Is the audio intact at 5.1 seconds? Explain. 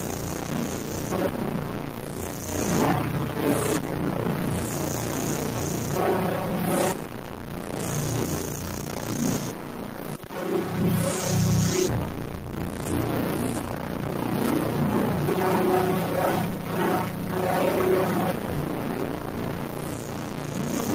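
No. A noise suppressor for speech runs throughout, treating steady sound as noise, so sustained parts and tails dip by about 5 dB and pump. The waveform envelope shows uneven dips, and spectrogram tails thin out.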